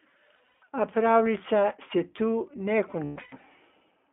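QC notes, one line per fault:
Throughout, iLBC codec: the sound sits in a narrow line band of roughly 200 Hz to 3.5 kHz, with nothing bright on top. There's a rough, slightly synthetic edge because each short chunk, fitting 20 ms frames at about 15.2 kbps, is coded independently.
0.36–0.60 s and 3.04–3.41 s, lost iLBC frames: the first stretch loses about 160 ms scattered over 240 ms, and the second, just after "pravljica se tu ne", loses about 300 ms over 360 ms. The decoder papers over each gap by repeating the last pitch cycle mixed with noise, so you hear brief held, buzzy vowel-like smears. The longest of these runs is under a tenth of a second in the first stretch and around 150 ms in the second, and the voice recovers almost instantly each time.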